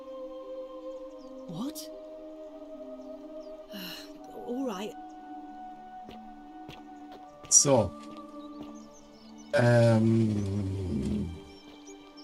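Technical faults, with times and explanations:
No technical faults can be heard anywhere.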